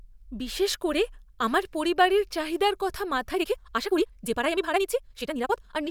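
From 3.29 s to the end at 5.91 s, right after "আমার পরিবারের চাহিদার কথা", the speech abruptly turns rushed, running at roughly twice its earlier pace while the pitch stays where it was. This is a time-stretched section, sped up by a factor of 1.96. The likely cause is software squeezing that stretch of audio to fit a shorter length, dropping short pieces to keep the pitch, which leaves a hurried rhythm.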